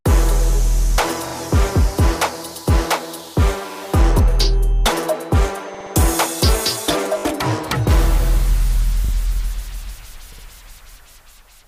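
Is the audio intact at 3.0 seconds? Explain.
Yes, the audio is intact at 3.0 seconds, with no dropout, click, distortion or other technical fault audible at that moment.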